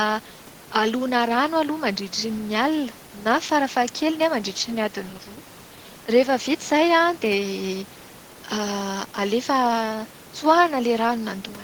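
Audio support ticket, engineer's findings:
No faults found in the clip.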